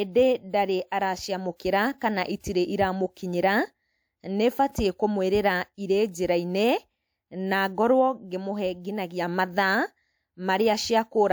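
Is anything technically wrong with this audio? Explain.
Yes. The speech carries pre-echo before five sharp attacks, at 0.51, 1.56, 1.98, 2.41 and 6.11 s. Each lasts roughly 27 to 40 ms. A transform codec quantises a block at a time, and its noise is spread across that whole block. When a loud onset lands late in a block, noise sized for that onset also fills the quiet gap just ahead of it. You hear a brief hiss leading into each attack, and the attack itself sounds softened and smeared.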